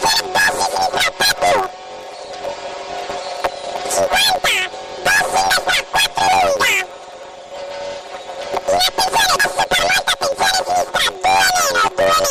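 Planar audio read as interleaved runs throughout: each 10.88 ms block of separated channels is played as alternating pairs, giving a robotic buzz at 91.9 Hz.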